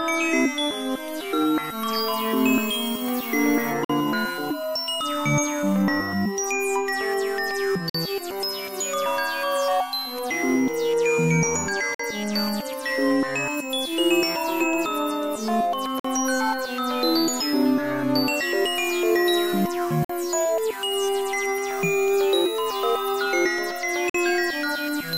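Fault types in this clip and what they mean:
adaptive stream starting at a low bitrate: for the first 2 s the player starts on a lean, HE-AAC-like encode before stepping up. The spectrogram shows thin, synthetic treble, then a sudden fill to 14.8 kHz.
gap between chunks: the audio arrives in 4 s chunks separated by 50 ms silences, from 3.85 s on. The waveform shows hard-edged flat breaks at each join.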